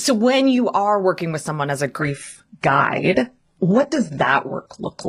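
From 1.99 s, just after "with someone as a", the adaptive stream drops to a lower bitrate, seamlessly and until the end. Codec artefacts rise, suggesting HE-AAC near 12 kbit/s. A spectrogram shows everything above 11.1 kHz cut off abruptly, with no gap in the waveform.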